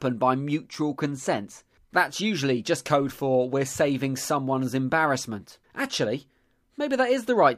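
Listening to this speech recording, nothing stood out as a technical problem at any point.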